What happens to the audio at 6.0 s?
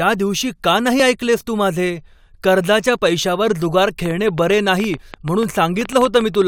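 At 6.0 s a train of clicks is running, from 4.06 to 6.43 s after "माझे कर्जाच्या पैशावर जुगार": about 20 similar pops at an irregular 8.4 per second, peaking around 10 dB above the speech, likely from nearby interference.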